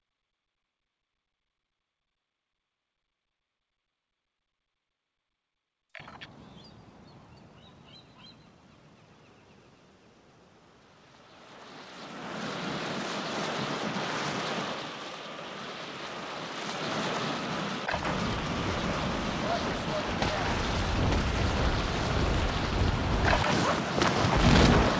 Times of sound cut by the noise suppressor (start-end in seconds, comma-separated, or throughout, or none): none